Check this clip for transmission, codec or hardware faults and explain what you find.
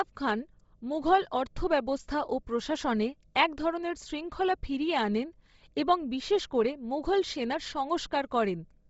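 One fault runs through the whole speech clip: Bluetooth LC3 compression. From start to finish the voice has a breathy, grainy edge, and nothing is heard above 7.7 kHz. The likely cause is the LC3 codec of Bluetooth LE Audio, which fits 7.5 ms frames and a low bitrate of around 24 kbps. At that rate it empties much of the upper spectrum and refills it with noise, so the top end sounds hissy.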